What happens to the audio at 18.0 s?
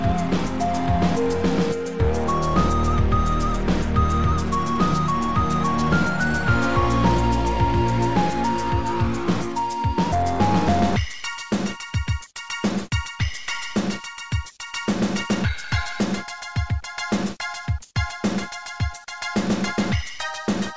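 Nothing goes wrong at 18.0 s: the audio carries on intact through the G.722 call path, with its usual band limit leaving nothing above 8 kHz.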